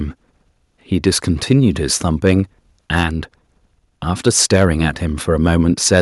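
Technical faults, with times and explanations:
4.27–4.65 s and 5.95–6.01 s, microphone overload: the loudest syllables turn harsh and crackly, with peaks flattened about 7 dB and then about 2 dB over the ceiling, likely from input gain set too high at the converter. The grit follows only peak moments, unlike steady codec noise.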